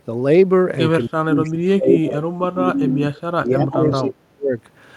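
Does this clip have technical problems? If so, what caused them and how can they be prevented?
Yes. Two faults can be heard.

From 1.09 s to 4.52 s the speech is suppressed in double talk. The level repeatedly ducks, at its deepest by about 30 dB, over roughly three seconds in total. The likely cause is an echo canceller that could not tell this talker apart from loudspeaker echo while both sides spoke, so it turned everything down. It can be prevented by using a canceller with proper double-talk detection, or a headset so less echo reaches the microphone.

From 3.72 s to 3.96 s there is an echo leak. A delayed copy of the speech arrives 319 ms behind the original, about 10 dB quieter. The likely cause is a loudspeaker on one side of the call whose echo canceller did not remove everything its microphone picked up, so the remainder came back down the line. Unlike room reverberation, this is a distinct repeat after a clear gap, not a smooth tail that decays straight out of the speech. 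It can be prevented by having that side use headphones or lower the speaker volume, so their canceller can fully suppress the echo.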